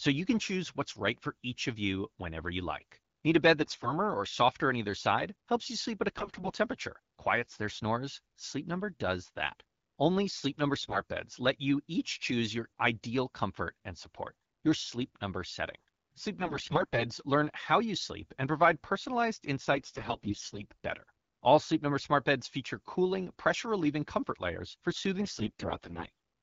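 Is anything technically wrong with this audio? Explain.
Yes, there are AMR bit errors, in six short bursts: 3.62–3.93 s, 6.15–6.54 s, 10.81–11.00 s, 16.39–17.06 s, 19.72–20.64 s and 25.22–26.10 s. It sounds like a weak link flipped a fair share of the less protected bits in each frame, roughly one in six or so, while the checks on the critical bits still passed. The decoder then drove its vocal model with misplaced pulses and wrong gain and spectrum values, so the speech keeps roughly its pitch and level but goes hoarse, scratchy and gargly in those spots. Underneath, the wideband AMR coding itself sounds clean, which fits a rate around 12.65 kbit/s.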